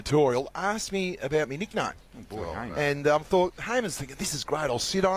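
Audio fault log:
Nothing to log here: the audio runs without a single fault worth noting.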